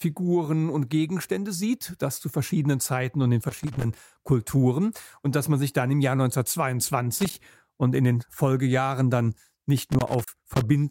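Loose connector crackle breaks into the sound three times, at 3.43 to 3.84 s, 7.18 to 7.41 s and 9.78 to 10.61 s, as irregular scratchy bursts. A worn or dirty contact is making and breaking as it shifts, chopping the signal and adding pops wherever DC sits on the line.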